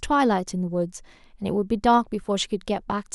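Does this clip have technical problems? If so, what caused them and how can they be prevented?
No, there are no technical problems in this speech.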